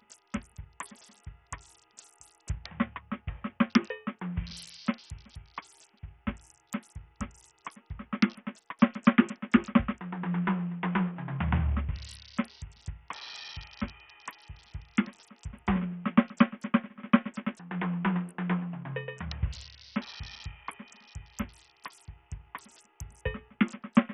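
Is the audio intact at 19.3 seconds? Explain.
No. At 19.3 s the music carries Bluetooth SBC compression damage that runs through the whole clip, likely from a low bit pool. The codec splits the signal into a few wide sub-bands and shares a small bit budget among them, so the faint upper bands get almost nothing. The treble drops out and flickers, while coarse quantisation leaves a gritty noise with aliasing on top. The heavy damage fits a bitrate near 48 kbps.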